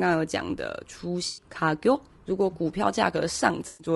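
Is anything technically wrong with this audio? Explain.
Yes. Two faults are audible.

Throughout, the speech sounds rough and grainy, with noise between the harmonics and a thin, synthetic top band. This is likely low-delay AAC compression, such as AAC-ELD. Its short frames resolve pitch poorly, and the damage fits a bitrate near 32 kbps.

There is AAC frame loss with concealment from 1.27 to 1.45 s and from 3.67 to 3.87 s. Each patch sounds smeared and noisy. The decoder filled about 100 ms and 120 ms by reusing the last good spectrum.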